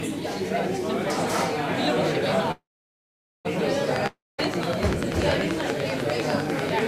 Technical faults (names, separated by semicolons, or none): call audio freeze; train of clicks; long network dropout